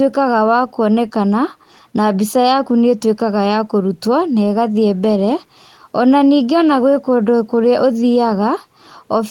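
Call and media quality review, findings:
Nothing to flag here: no faults turned up anywhere in the speech, so there's nothing to open a ticket for.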